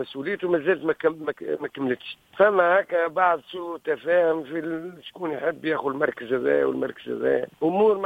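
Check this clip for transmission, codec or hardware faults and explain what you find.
No transmission, codec or hardware faults can be heard anywhere in this clip.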